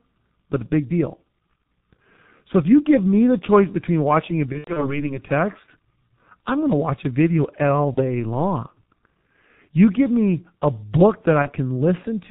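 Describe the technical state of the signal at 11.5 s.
VoIP packet loss concealed by the speech codec occurs from 11.42 to 11.51 s. About 30 ms of audio, which fits a single lost frame, never arrived, so the decoder rebuilt the gap from its last pitch and filter state while lowering the gain. The sound smears into a fading buzz or coloured noise. Because each frame builds on the previous one, the sound stays weak or distorted for tens of milliseconds or more after 11.51 s.

The G.723.1 codec runs under this moment as it does throughout the clip, and the damage is heavy. Its 30 ms frames and very low bitrate, which fits the 6.3 kbit/s mode, cut everything above 4 kHz and update the speech model slowly. The speech is muffled and hoarse, and consonants are blurred, both around the concealed gap and within it.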